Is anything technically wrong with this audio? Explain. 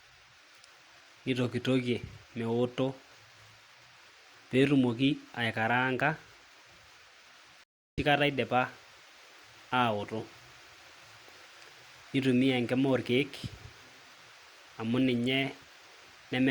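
Yes. A playback stall occurs from 7.64 to 7.98 s. The speech cuts out mid-flow for 340 ms, then resumes at "kata idipa". The likely cause is the player's buffer running dry or its thread blocking. The waveform flatlines and the spectrogram shows an empty vertical band.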